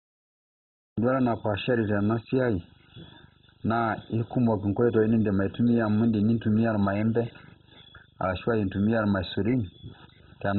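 The first 0.98 s is dead digital silence, and the speech then bursts in mid-sound with no attack or fade-in. This is a cut-off start: the recording or stream began late, so it catches the speech already under way rather than at a natural onset.

Throughout, the speech sounds dull and muffled, with nothing above 4 kHz, and carries a gurgling, granular roughness. The likely cause is heavy MP2 compression at a very low bitrate, around 16 kbps: upper sub-bands are switched off and the remaining bands are coarsely quantised.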